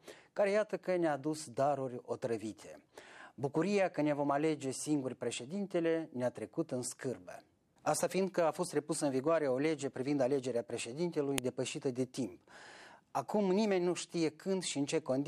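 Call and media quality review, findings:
File header played as audio at 11.38 s: sharp click as a joined segment begins; leftover WAV header bytes decoded as samples at the splice, likely in concatenation or streaming.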